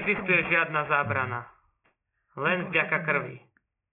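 Aliasing runs from start to finish: the audio was downsampled without an anti-alias filter, consistent with a drop to a 6 kHz rate, so energy above 3 kHz folds back below it. Sibilants turn gritty and metallic, with false tones roughly 15 dB under the speech.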